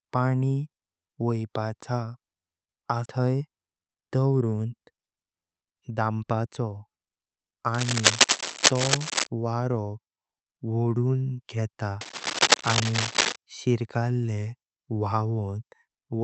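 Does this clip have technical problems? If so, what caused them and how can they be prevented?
Yes. A skip ahead at 3.05 to 3.07 s drops roughly a second of speech, and the two sides are spliced almost directly with no fill. This happens when a backlog builds up and the receiver discards the oldest waiting audio to catch up. Steadier network delay and a jitter buffer allowed to grow rather than discard would prevent it.

A jitter buffer speed-up runs from 3.19 to 6.47 s. The speech plays at about 114% of normal rate at unchanged pitch, sounding hurried, as the receiver trims short pitch-period slices until roughly half a second of excess delay is gone. Smoother packet delivery that avoids bursts of late arrivals would prevent it.

Cable scratch noise appears at 7.74 to 9.27 s, about 5 dB above the speech, and again at 12.01 to 13.36 s, at about the same level as the speech. These are harsh, uneven scratching bursts, likely from a worn cable or connector whose contact resistance flickered as it moved. 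Replacing or securing the cable would prevent it.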